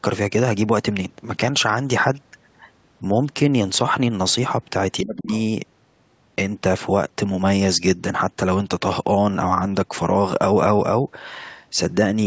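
Speech suppressed in double talk hits this speech clip from 5.01 to 5.32 s, where the voice sinks by about 25 dB at its deepest for roughly a third of a second. The likely cause is an echo canceller that, with both ends talking at once, could not tell its own talker from loudspeaker echo and turned both down. The other side's voice leaking through follows from 5.34 to 5.42 s as a brief, faint scrap about 25 dB below the talker, likely far-end audio from the loudspeaker that the canceller left in the microphone signal. The call microphone processing leaves nothing above 8 kHz.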